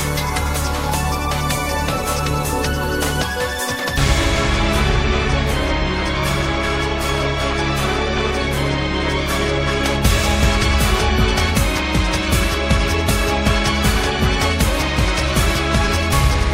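No technical faults can be heard anywhere in the recording; the signal stays steady and intact throughout.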